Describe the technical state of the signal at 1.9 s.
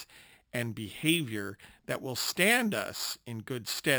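At 1.9 s the speech carries imaging from sample-and-hold upsampling, present across the whole clip. The audio was raised from 12 kHz to 48 kHz by repeating each sample four times without a smoothing filter. This mirrors the 0–6 kHz band into 6–12 kHz and on up to 24 kHz, about 11 dB below the signal. The result is a metallic fizz that tracks loudness. A spectrogram shows upside-down formant copies above 6 kHz, and the waveform shows staircase steps.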